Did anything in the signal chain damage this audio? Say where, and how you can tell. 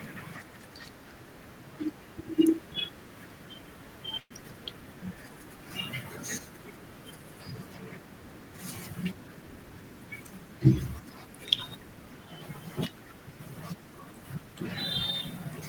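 Yes. At 4.19 s there is a call audio freeze lasting about 0.13 s. The last sound is stretched into a fading buzz or hiss, then about 60 ms of silence. Speech resumes where it stopped, with nothing lost. This likely came from network packets stalling and draining the jitter buffer.

From 9.04 to 9.71 s there is a jitter buffer speed-up. The speech runs at 113% speed but keeps its pitch, so it sounds hurried. The receiver cut about a tenth of a second of short pitch-period slices to shrink excess buffered delay.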